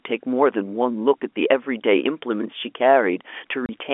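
At 3.66 s the speech drops out for 30 ms, ending at 3.69 s. This is packet loss filled with silence. The gap fits one lost packet. Nothing replaced it, so the audio stops dead and restarts with hard edges, over the narrow telephone band of the G.711 line.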